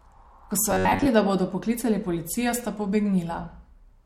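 From 0.71 to 1.08 s, just before "da bodo poklicali policijo", the speech turns into a rigid metallic buzz pitched near 93.8 Hz. The likely cause is robotic sound from repeated short buffers: audio arrived too slowly, so about 11 ms chunks were replayed to fill the gap while most of the real signal was skipped. Unlike a low-bitrate codec's warble, the buzz sits at one fixed rate and follows the original speech only roughly.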